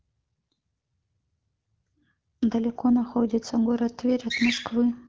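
The speech comes through an AMR wideband (HD Voice) link with nothing above 7.1 kHz and a clear character that fits a rate of 12.65 kbit/s, and no technical faults can be heard.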